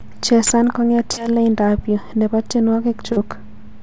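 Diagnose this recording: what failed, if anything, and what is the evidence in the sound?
Both problems sit at the network stage, on a call path whose audio stops cleanly at 8 kHz, which fits a wideband codec like G.722. The first is a burst of packet loss from 1.12 to 1.21 s. About 40 ms of audio never arrived, and the receiver stretched the last sound over roughly 49 ms, fading it down. When the real signal comes back it has jumped ahead, so that bit of the sound is simply gone rather than delayed.

The second is a short concealed packet loss from 3.12 to 3.19 s. Again about 40 ms went missing in transit, and the decoder papered over it with about 38 ms of synthesized continuation before crossfading back into the real stream. You hear it as a quick smear or wobble rather than a gap.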